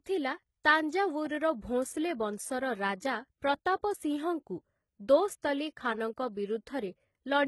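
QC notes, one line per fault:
Throughout: likely HE-AAC compression, heavy damage. The sound fits roughly 16 kbps, with treble rebuilt by copying lower bands upward, so harmonics misalign and sibilants turn gritty and metallic. A spectrogram shows smeared, repeated-looking high bands stopping dead near 11.8 kHz.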